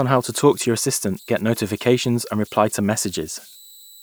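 Throughout the clip, an undithered delta-sigma converter settles into repeating bit patterns whenever its input runs low, producing converter idle tones. A faint whistle around 4 kHz sits roughly 27 dB below the speech, most exposed in pauses and adding grainy noise under quiet passages.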